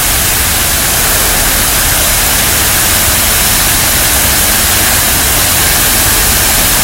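Hard clipping runs through the whole recording: the sound was driven about 5 dB past what a stage in the chain could pass, so roughly 0.7 percent of samples had their peaks cut flat, adding high harmonics heard as crackle on the loudest moments.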